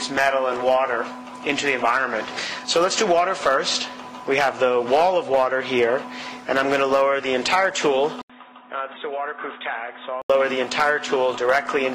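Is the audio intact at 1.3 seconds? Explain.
Yes, the audio is intact at 1.3 seconds, with no dropout, click, distortion or other fault at that moment.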